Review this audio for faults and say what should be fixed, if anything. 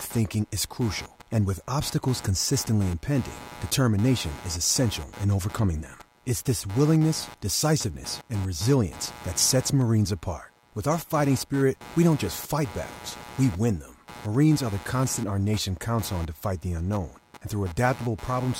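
Computer activity noise runs through the whole speech recording. Load changes in the processor and peripherals are shifting the audio circuit's shared ground, leaving a buzzing pulse at roughly 100 per second, sitting about 20 dB below the speech and following the computer's workload rather than the talking. To prevent it, record through an external or galvanically isolated audio interface, or add a ground-loop isolator, so the signal path no longer shares the computer's noisy ground.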